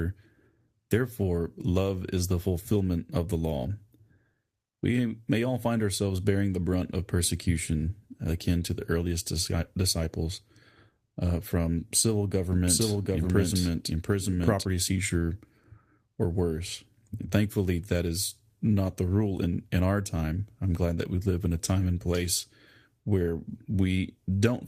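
At 12.53 s, right after "uh from civil", a doubled audio track cuts in and runs until 14.65 s. A second full-band copy of the speech trails the original by roughly 0.7 s, at about the same level, with no decay or room colouring, and it starts and stops abruptly. The likely cause is the signal being captured twice, once through a slower path, or an edit leaving two offset copies overlapping.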